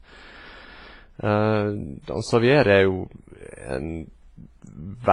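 Transcoding between lossy codecs runs through the whole speech clip: the sound has nothing above 11.2 kHz and mixes two kinds of coding artefact, which points to a low-rate WMA encode likely re-encoded as HE-AAC, the second codec adding its own artefacts to the first's.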